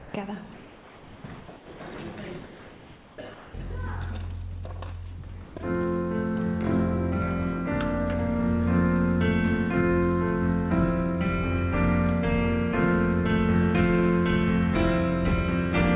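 The background pauses at 0.00–0.14, 0.54–1.24, 1.40–1.48, 1.56–1.80, 2.44–3.18 and 3.34–3.54 s turn into steady, featureless hiss about 2 to 4 dB quieter. This is comfort noise in place of the background, likely from discontinuous transmission. Unlike the other fault, no sound is lost. At 1.94–1.98 s and 5.44–5.56 s, actual sound gives way to that same flat noise. This is sound dropped by the voice detector, which likely misjudged quiet material as background. Throughout, the G.711 call path leaves nothing above 4 kHz.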